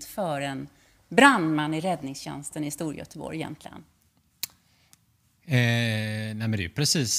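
No technical faults are audible.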